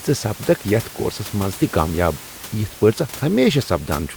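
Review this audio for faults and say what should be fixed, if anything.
No faults; nothing to fix.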